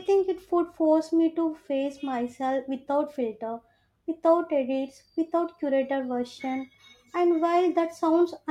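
Listening to the speech recording, nothing stood out as a technical fault at any point.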